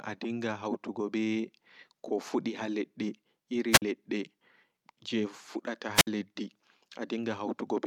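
Speech, interrupted twice by wireless microphone squelch dropout. At 3.71 to 3.82 s and again at 5.94 to 6.07 s, hiss rises briefly. The output then mutes for about 45 ms and 60 ms. The radio signal fades until the receiver's squelch gates the audio off.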